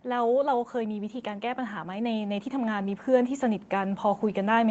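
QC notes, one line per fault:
0.05 to 4.71 s, automatic gain rising: the automatic gain control judged the input too quiet and kept raising its gain across the whole stretch, so the speech and the background noise swell upward together, slowly and steadily, rather than the level holding still.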